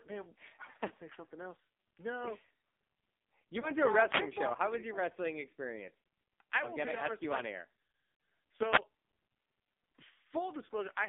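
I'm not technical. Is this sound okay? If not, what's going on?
No. The whole recording went through an AMR narrowband mobile codec, the speech compression used on older mobile phone calls. It passes only roughly 250 Hz to 3.6 kHz, so the voice sounds thin, boxy and buzzy and synthetic, and the compression damage here is heavy.

There are also lost AMR speech frames: brief dropouts where the phone link lost chunks of data and the decoder covered the gaps by stretching the last good sound. You hear short warbles or smeared, fading bits around 3.60 to 3.71 s (before "to no a"), at 5.99 s (before "I am gonna ask", about 80 ms missing), at 8.14 to 8.20 s (after "you like on air") and at 10.66 to 10.69 s.

Two wireless microphone noise hits occur, from 4.08 to 4.22 s and from 8.70 to 8.80 s. Each is a short swish or burst of static where the radio microphone's signal briefly weakened and receiver hiss broke through over the voice.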